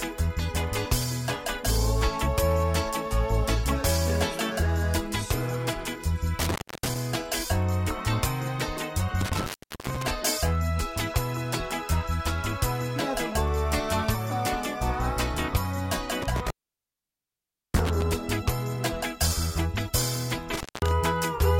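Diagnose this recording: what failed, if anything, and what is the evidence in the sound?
The sound drops out four times with a crackle at each edge, leaving faint hiss while it is gone: 6.39 to 6.96 s, with about 0.28 s of silence; 9.21 to 10.11 s, about 0.41 s; 16.22 to 18.02 s, the longest at about 1.24 s; and 20.54 to 20.91 s, about 0.19 s. This is an intermittent contact in the analogue wiring. A loose plug or cable conductor briefly opens, and the scraping contact produces the crackle as the signal path breaks and remakes.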